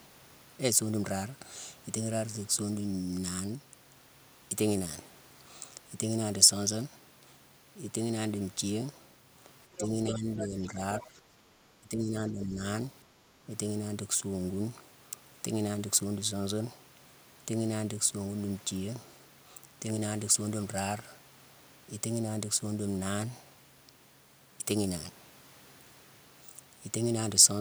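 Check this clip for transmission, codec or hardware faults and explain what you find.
There are three echo-canceller problems, all bunched between about 9.7 and 13.5 s.

Speech suppressed in double talk happens three times: 9.68 to 11.2 s, 11.8 to 12.6 s, and 13.07 to 13.48 s. The talker's level sags by roughly 10 dB in the first two, for around 0.7 s each, and more like 15 dB in the last, briefer one. The likely cause is the canceller failing to tell the near talker from loudspeaker echo while both were active, so it pulled everything down together.

The other side's voice leaking through shows up right alongside that first dip, from 9.76 to 10.47 s, and it's fairly prominent, only around 5 dB under the talker. A second, much fainter scrap follows at 11.0 to 11.07 s, roughly 15 dB down. The likely explanation is that the far end's audio, coming out of the talker's loudspeaker, wasn't fully subtracted from the microphone signal, so pieces of it ride along.

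Background gated by the echo canceller gives a quick notch in the room sound at 11.48 to 11.52 s, about 40 ms long and about 7 dB deep. Here the canceller clamped the mic hard while the loudspeaker was playing, then released, so the ambience briefly ducks and pops straight back.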